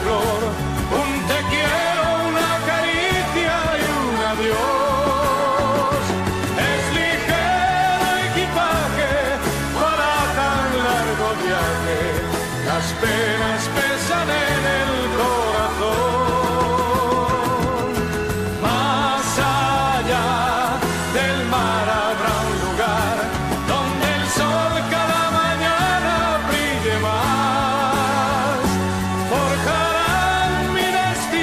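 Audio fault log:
throughout: computer activity noise. A low buzzing runs under the sound for the whole clip, made of rapid pulses that repeat about 100 times a second and sit about 25 dB below the signal. It comes from the computer's own workload: as the processor or graphics load shifts, the current it draws disturbs the ground shared with the audio circuitry, and that disturbance rides into the signal path. The buzz follows the machine's activity, not the audio.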